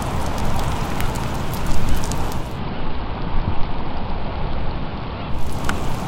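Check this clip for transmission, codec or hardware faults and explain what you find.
One fault is present: digital radio blending to analogue, running from 2.28 s to 5.63 s. The receiver lost its digital stream and cross-faded over about 348 ms to the station's AM broadcast, then faded back. During the AM section the level drops by about 3 dB, and a hiss appears roughly 40 dB below the signal. AM's narrow broadcast bandwidth also dulls the top end of the sound until the digital path returns.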